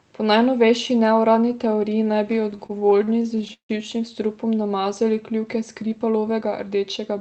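A speech clip carried over a call link, with high frequencies stopping near 8 kHz as a wideband Opus codec does. From 2.51 to 3.71 s, just after "neuradni teoriji naj bi" and up to "živčnim strupom namazali", the audio shows repeated stalls (stutter). The jitter buffer kept running dry as packets arrived late. Each time, the receiver stretched the last sound to fill the wait and faded it in the longer ones. About 365 ms of filler is spread through this span, roughly 30 percent of it. The longest hold is 161 ms. Nothing is lost, but the speech drags and hiccups. From 6.01 to 6.49 s there is a jitter buffer speed-up. The buffer had built up extra delay, so the receiver cut out short pitch-period slices one after another, about 50 ms in all. The speech runs about 10 percent fast at unchanged pitch and sounds hurried.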